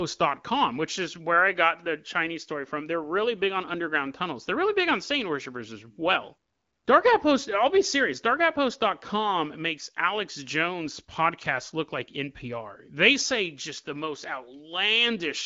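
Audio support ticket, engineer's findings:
Nothing to flag here: the speech comes across as HD Voice, AMR wideband at a comfortable rate near 16 kbit/s, with only light coding texture and the expected top end stopping around 7.4 kHz.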